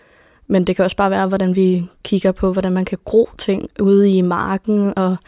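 The speech recording shows no audible technical fault anywhere in its duration.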